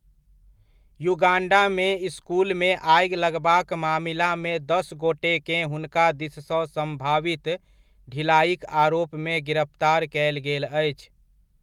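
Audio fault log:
No faults detected in this speech clip.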